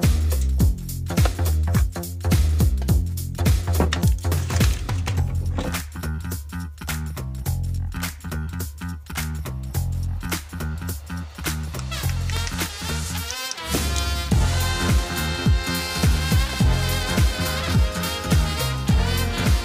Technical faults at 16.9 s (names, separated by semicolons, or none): none